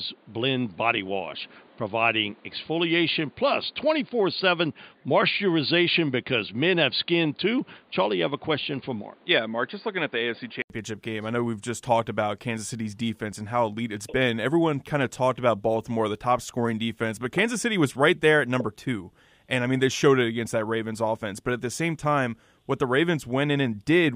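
Speech where, from the start to 10.7 s, an input switched to a poorer device likely explains the dull band ending near 4.8 kHz and the new noise floor. The short silence at the switch, before "game I know we've", separates it from a gradual filter.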